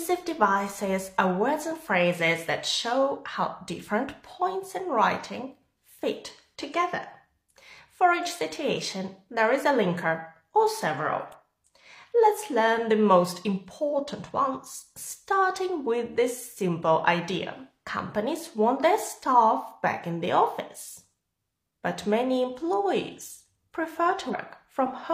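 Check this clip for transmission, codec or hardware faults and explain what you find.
Two kinds of trouble here, both short. At 11.32 s and again at 22.73 s there's a sharp snap sitting on top of the sound, each over almost instantly. That's most likely an electrical switching spike, where a nearby switch or motor arcs and the audio line picks up the burst. Then from 24.29 to 24.35 s, roughly 50 ms, there's a quick glitch: damaged data in a compressed stream, where the decoder hits corrupted frames, loses sync and jumps ahead to the next good header.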